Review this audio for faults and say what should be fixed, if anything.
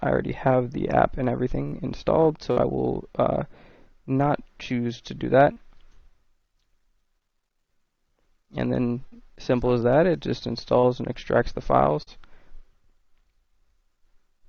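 Six brief smears or wobbles break the audio at 1.67–1.75, 2.52–2.59, 5.52–5.59, 9.08–9.15, 10.80–10.86 and 12.03–12.10 s, each sounding like the preceding sound briefly stretching before it rejoins. This is short concealed packet loss: about 40 ms of audio arrived too late or not at all each time, and the receiver covered the gap by extending the last sound for 32 to 45 ms, then crossfading back. Fixing it means reducing network loss and jitter, or adding forward error correction and a slightly deeper jitter buffer.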